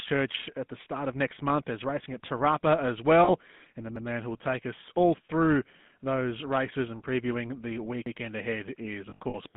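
The speech runs through a GSM full-rate codec from start to finish, with the line band limited to roughly 150 Hz to 3.6 kHz. The codec rebuilds the voice from a vocal-tract model driven by a sparse, regularly spaced pulse excitation, which fits the 13 kbps full-rate scheme. That coarse excitation gives the whole clip a plainly audible buzzy, gravelly roughness, and the band limit leaves the speech thin and muffled, with nothing above 3.6 kHz. Lost GSM frames occur twice. From 3.24 to 3.29 s about 40 ms of data is missing, which points to two 20 ms frames. The decoder fills the gap by repeating the last good frame's settings, so the sound is briefly held as a rough, metallic ring. From 9.1 to 9.35 s about 120 ms is lost, scattered over 240 ms, with the longest run around 70 ms. This produces a stretch of broken, ringing, smeared sound rather than clean speech. Overlapping chunks show up at 3.96 to 4.06 s and 8.06 to 8.16 s. 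The audio was handled in blocks of about 4 s, and each block began before the previous one ended. At each join the same 100 ms piece plays twice, so roughly every four seconds there is an audible stutter or click where the sound jumps back and repeats itself.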